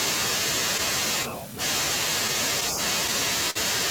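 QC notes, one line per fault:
Throughout: clock drift between sender and receiver. The sending clock runs roughly 3 percent slower than the receiving one, so the jitter buffer steadily drains instead of holding a steady level. To keep playback going, the receiver repeatedly repeats or stretches short slices of the speech, which comes across as small timing hiccups scattered unevenly through the whole clip, with an uneven, stuttering pace rather than any single obvious break.
3.50 to 3.57 s: short stall from a late packet. A packet failed to arrive on time and the buffer ran dry, so the receiver held the last sound for about 50 ms of filler until the data turned up, then resumed from exactly where it left off. Nothing is lost, but the sound there is drawn out unnaturally, with a slight buzzy or dipped quality, and everything after it plays about 50 ms later than before.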